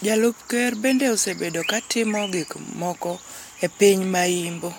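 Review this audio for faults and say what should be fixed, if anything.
Nothing to fix; no faults heard in the speech.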